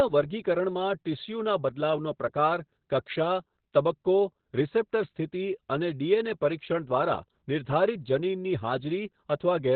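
Muffled, hoarse and faintly robotic from start to finish, with nothing audible above about 4.4 kHz: this is Opus voice compression working in its narrowband SILK mode, coding the excitation coarsely, which fits a bitrate around 8 kbps and heavy codec damage.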